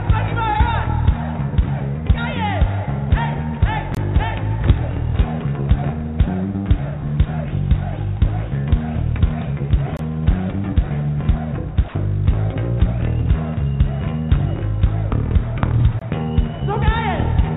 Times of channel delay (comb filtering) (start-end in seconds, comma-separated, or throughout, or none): none